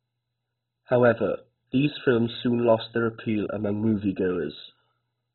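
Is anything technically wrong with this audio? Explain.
Yes. Throughout the speech, the likely cause is heavy MP2 compression at a very low bitrate, which fits roughly 16 kbps. With so few bits, Layer II switches off every sub-band above about 4.1 kHz and coarsely quantises the rest, so the voice sounds dull, with a gurgling, granular distortion.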